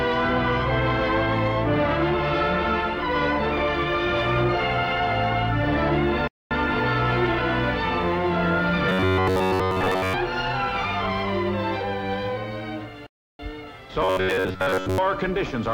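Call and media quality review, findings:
Playback stall at 6.27–6.51 s (0.23 s) and 13.06–13.39 s (0.33 s): sound drops to silence mid-flow, then resumes. Likely player buffer underrun or blocked playback thread.

Robotic sound from repeated short buffers at 8.89–10.14 s and 14.02–14.98 s: rigid metallic buzz near 94 Hz. Likely late packet delivery, concealed by looping a buffer of about 10.7 ms while most real audio is skipped.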